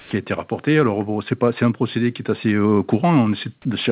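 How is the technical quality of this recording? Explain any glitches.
The recording has two related glitches in its first tenth of a second, both tied to how the call link handles silence. The audio also has nothing above 4 kHz, which fits a narrowband telephone codec on the call path.

Comfort noise in place of the background, 0.0 to 0.11 s, just before "a été rapporté": the sending side likely stopped transmitting while its voice detector heard no speech, so the receiver filled the gap with synthetic noise. The genuine background, sitting about 29 dB below the loud parts, becomes a flat, detail-free hiss about 1 dB quieter, lasting 110 ms until the real signal resumes.

Onset clipped by the voice detector, 0.09 to 0.11 s, at the start of "a été rapporté": the detector was likely slow to register that speech had begun, so the first 20 ms were never sent and synthetic noise played in their place. 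The speech therefore starts abruptly, missing its soft attack, as though the beginning were shaved off.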